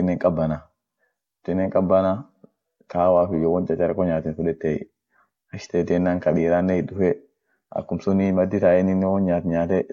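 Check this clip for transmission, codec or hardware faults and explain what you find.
No transmission, codec or hardware faults can be heard in this speech recording, and the signal comes through without dropouts, distortion or interruptions.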